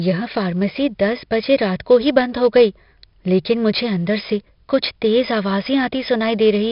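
Throughout, 4-bit ADPCM compression coarsely quantises each step, leaving gritty hiss riding every loud syllable; a spectrogram shows level-tracking noise and nothing above 5.3 kHz.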